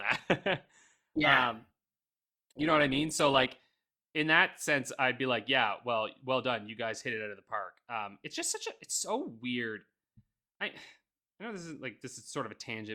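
For the first 4.0 seconds this speech sounds dull, with the treble missing and codec artefacts stronger. At 4.0 s the quality jumps up abruptly with no gap or dropout. That pattern marks an adaptive stream starting at a low bitrate. The player began on a low-quality rendition to get going quickly, and the sound fits Opus at around 16 kbit/s. Once it had gauged the connection it switched to a richer version, consistent with roughly 64 kbit/s.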